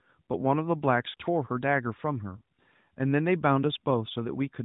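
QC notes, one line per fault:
1.10–1.14 s, lost AMR speech frames: the speech briefly smears into a drawn-out hold that softens before the voice comes back weak or rough for a moment. The 40 ms gap fits two dropped 20 ms frames, concealed by repeating the last good pitch and vocal-tract settings at falling gain.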